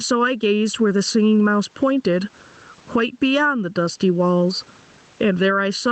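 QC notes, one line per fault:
throughout – channel delay (comb filtering): one channel lags by roughly 0.7 ms, so the mono sum cancels at evenly spaced notches from around 700 Hz, making speech hollow.
throughout – gain pumping: the gain swings about 20 dB, pulling down on loud syllables, with the room background about 45 dB below speech, likely from excessive gain hitting a fast limiter.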